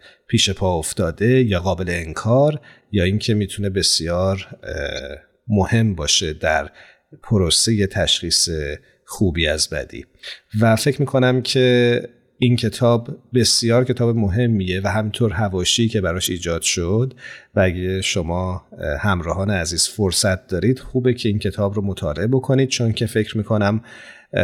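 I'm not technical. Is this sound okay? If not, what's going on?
No. Six short chirps or blips interrupt the speech, at 4.95–4.99, 9.11–9.19, 12.40, 16.24–16.28, 18.02–18.05 and 20.80–20.83 seconds. Each is a corrupt frame decoded: a damaged chunk of compressed audio was played anyway, so its sound comes out at the wrong pitches.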